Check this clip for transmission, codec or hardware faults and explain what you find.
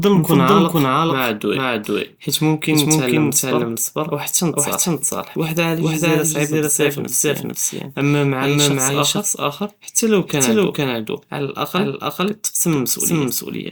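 One fault runs through the whole speech clip: a doubled audio track. Every phrase is followed about half a second later by a second, equally loud copy, dry and full-band with no room decay. The likely cause is the same signal reaching the mix twice, once through a slower path.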